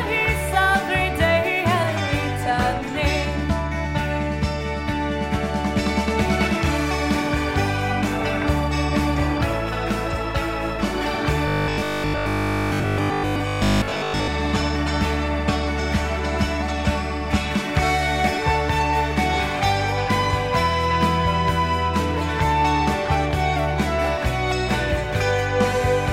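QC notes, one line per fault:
11.48 to 14.30 s, robotic sound from repeated short buffers: for nearly three seconds the sound turns into a rigid, metallic buzz at 50 Hz. It still roughly follows the contour of the material around it. The cause is likely a playback path starved of new audio that loops the last 20 ms chunk to fill the gap. Most of this stretch is repeats rather than fresh audio. The fixed 50 Hz pitch is the repeat rate.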